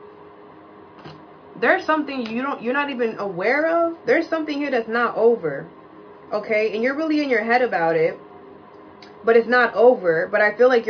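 No technical faults are audible.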